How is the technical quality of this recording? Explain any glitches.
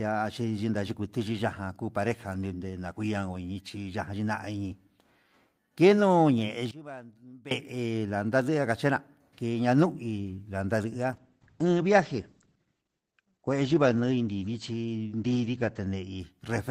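Two faults stand out in the recording.

From 6.71 to 7.51 s the speech suddenly drops by about 20 dB. The voice nearly vanishes, leaving a faint trace. The likely cause is one channel inverted. One stereo side has reversed polarity. When the two sides are summed to mono, the centred voice cancels. Only the small difference between the channels survives.

From 11.13 s to 16.25 s comes a call bitrate drop. The call's bandwidth estimate fell, so the encoder had to spend far fewer bits. The sound fits a fall from about 32 kbps to about 11 kbps. It stays at that low quality for about 4.7 s. The top end narrows from 20 kHz to 8 kHz. The speech becomes muffled, coarse and watery, and sibilants lose their crispness.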